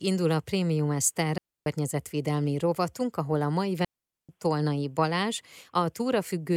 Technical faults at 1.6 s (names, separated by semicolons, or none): digital wireless dropout